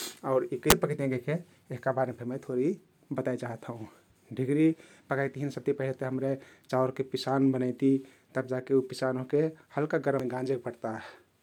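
From 0.35 to 0.72 s the speech breaks up, and at 10.20 s a momentary glitch cuts through, both from damaged data in the compressed stream. Corrupted bytes made the decoder misread frames, lose sync and hunt for the next valid header. On a spectrogram each appears as a smeared, broadband patch or vertical streak unrelated to the surrounding speech harmonics. The waveform shows a discontinuity at 0.35 s and at 10.20 s.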